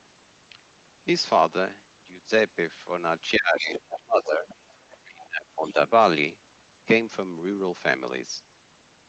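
At 3.37 s the talker's speech sinks, and it stays weak until 4.46 s. This is speech suppressed in double talk. The deepest dip is around 20 dB, and about a second of speech is affected. Both ends were likely talking at once. The echo canceller could not tell the near voice from loudspeaker echo, so it turned everything down.

Inside that dip, from 3.73 to 3.99 s, a second voice comes through. This is the other side's voice leaking through. It sits roughly 10 dB below the talker. Two faint scraps follow, at 4.49 to 4.54 s and 4.91 to 4.96 s, much quieter, around 25 and 30 dB down. The likely cause is loudspeaker echo that the canceller did not fully remove from the microphone.

From 5.02 to 5.78 s the speech is suppressed again, dipping as far as about 25 dB over roughly 0.7 s. This is the same double-talk suppression as before. The band above 8 kHz is missing throughout, as expected from an Opus call path at 20 kbps.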